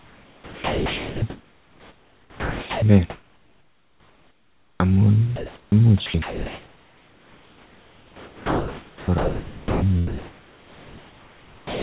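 Right from the start, 0 to 2.82 s, the speech is chopped by the voice detector. The sender likely keeps flipping between sending and going quiet, so soft syllables and word edges drop out and roughly 2.7 s in total gets filled with synthetic hiss. It sounds choppy. The same thing happens again from 6.06 to 9.82 s, where about 3.6 s is swapped out.

From 3.1 to 4.8 s we get comfort noise in place of the background. Once the detector probably decides nobody's talking, the receiver plays a smooth, featureless noise instead of the actual room, here about 3 dB quieter than the real background. It's short but happens again from 5.36 to 5.72 s, this time about 2 dB louder. The longest stretch runs from 10.07 to 11.8 s, about 5 dB down. Everything's band-limited to nothing above 4 kHz, which fits G.711 at 64 kbps, so the fill is dull too.

Each of those gaps ends with an onset clipped by the voice detector. 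The detector was likely slow to catch the restart, so the opening of the next sound went unsent and comes in abruptly, with no soft attack. That happens from 4.77 to 4.80 s and from 5.69 to 5.72 s, about 30 ms each. It's longest from 11.65 to 11.80 s, where about 150 ms is lost.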